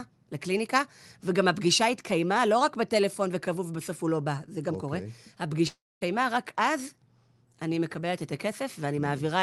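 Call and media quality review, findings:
Long network dropout, 5.67 to 6.03 s. Signal stops arriving for about 0.34 s; receiver stretches the last speech into a fading buzz, then roughly 0.23 s of near-silence before speech resumes at 6.03 s with the gap's content never recovered. Likely cause: packet loss burst on the network side, with jitter-buffer concealment covering the hole. The Opus call path shows its usual coding texture and a top end ending near 12 kHz.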